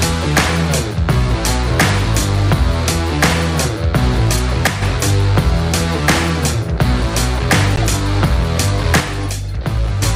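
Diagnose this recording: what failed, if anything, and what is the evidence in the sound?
The codec stage failed three times. A corrupt frame was decoded at 4.33 to 4.39 s, at 7.76 to 7.84 s, and at 9.25 s. Each is a short blip or burst of noise at the wrong frequencies. The first two peak around -5 dBFS. The last is much quieter. Each burst lasts only two or three frames, which fits damaged compressed frames being played instead of concealed. Flipped bits gave the decoder wrong gains and codes.

A sudden gain jump occurs twice, in the digital gain stage. At 4.67 s the level drops by about 6 dB and recovers at 4.82 s. At 9.00 s it drops by about 5 dB and stays down until 10.03 s. The sound and the background noise fall together, with no fade. That points to a gain change applied between one sample and the next. The likely cause is a gain setting or bit shift applied without a ramp.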